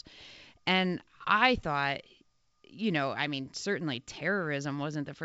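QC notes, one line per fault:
No faults heard in this wideband telephone speech.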